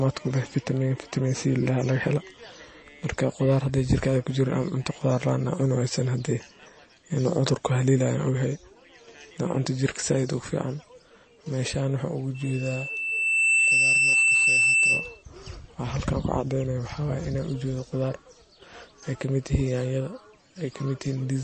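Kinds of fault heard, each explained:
MP3 compression: Nothing is heard above 8.3 kHz. The speech sounds dull, and the sibilants are thin and watery. Weak detail seems to flicker in and out, giving a swirly, metallic edge. This damage is plainly audible and runs through the whole clip. The likely cause is an MP3 encoder short of bits, which fits a low bitrate near 32 kbps. Starved of data, it cuts the treble and drops quiet frequency lines from frame to frame.
Loudspeaker feedback squeal: From 12.34 s to 15.23 s a steady tone at 2.7 kHz rises over the speech. It swells for about a second before it settles. It then sits at about 5 dB above the speech. This happens when a microphone picks up the loudspeaker it feeds. At one frequency the loop gain tops one, so that tone keeps feeding itself. It grows into a squeal until the amplifier limits it or the loop is broken.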